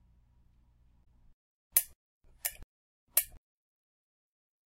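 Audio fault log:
1.01–1.07 s, damaged data in a compressed stream: corrupted frames briefly confuse the decoder, which loses sync and searches for the next frame header.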